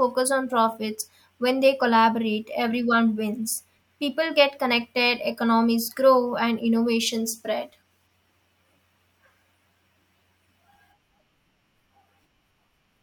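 No technical faults can be heard anywhere in the recording. The speech runs on without any moment that stands out as a problem.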